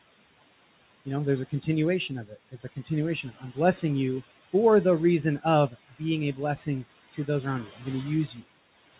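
Speech carried over a narrowband call path with nothing above 4 kHz, consistent with 64 kbps G.711 mu-law. Noise suppressor artifacts run throughout: steady room noise is pulled down by about 17 dB between phrases and returns under speech. Speech cut by the noise suppressor occurs at 2.29–2.9 s (drops of about 9 dB), 7.67–7.82 s just before "going to" (about 12 dB), and 8.27–8.43 s just after "going to" (about 7 dB), where the suppressor mistook soft speech for noise and swallowed it.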